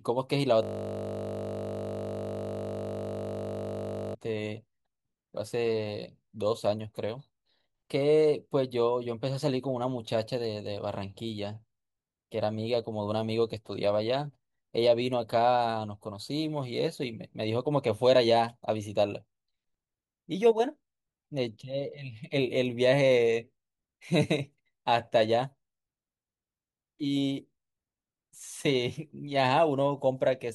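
From 0.63 s to 4.15 s the speech gives way to a system hang loop. The driver or machine stalled while the audio hardware kept replaying one 20 ms slice of its buffer, about 176 times over. Looped that tightly, it becomes a steady, rough buzz at 50 Hz. It sounds like mains hum, but real hum sits underneath the speech, while this loop replaces the speech entirely and ends abruptly when playback recovers.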